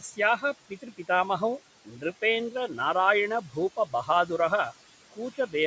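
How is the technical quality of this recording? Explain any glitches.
The speech has audible processing damage from a call-style noise suppressor, heard throughout and in five places where the speech itself is pulled down.

Noise suppressor artifacts run through the whole clip: the background sinks about 17 dB between phrases, because the suppressor turns down whichever bands it judges to be steady noise.

Speech cut by the noise suppressor appears at 0.0–0.19 s, 0.69–1.09 s, 1.85–2.04 s, 3.77–4.09 s and 5.11–5.54 s. In each window, roughly a tenth to a fifth of a second of quiet speech sounds swallowed, dropping by about 9 to 18 dB. The suppressor mistook those soft parts for noise.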